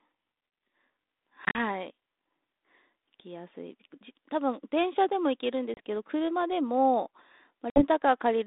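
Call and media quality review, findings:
Hard-edged silent holes at 1.45–1.59 s (70 ms missing across 100 ms, longest gap 40 ms), 5.74–5.80 s (30 ms) and 7.70–7.82 s (60 ms), each followed by slightly distorted speech that settles within tens of milliseconds. Packet loss on an ADPCM call: a handful of packets replaced by silence, leaving the receiving G.726 decoder's adaptive predictor and step size out of step with the sender's until it re-converges. The telephone band is 200 Hz to 3.7 kHz with light coding grit, which fits a 32 kbit/s link.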